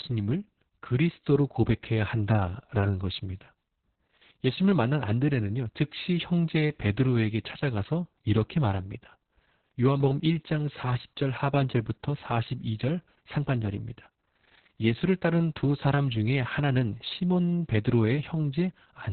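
Opus voice compression damages the speech for the whole clip. Nothing sounds above about 4.3 kHz, which points to narrowband SILK coding at a very low bitrate, near 6 kbps. The excitation is coded coarsely. Speech sounds muffled, hoarse and slightly robotic.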